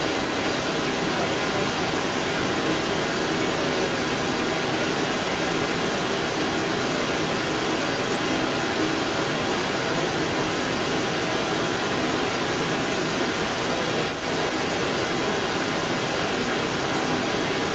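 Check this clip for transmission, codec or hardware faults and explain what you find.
One fault: an echo leak.

Echo leak, 0.0 to 17.7 s: a far-end loudspeaker's echo canceller likely let residual pickup through, returning a strong delayed copy about 255 ms late, roughly 10 dB up.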